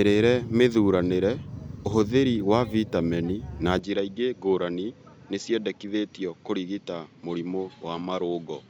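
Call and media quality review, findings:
Input switched to a poorer device at 3.79 s, right after "ũhũthĩri wa vitameni na", and it holds to the end. No gap at the switch. Speech abruptly loses its top end, with nothing above 7.6 kHz, and comes in about 5 dB quieter with a different tone and a new noise floor roughly 35 dB under the speech. Likely cause is the capture path jumping to another mic or headset profile with a narrower band and its own gain and noise.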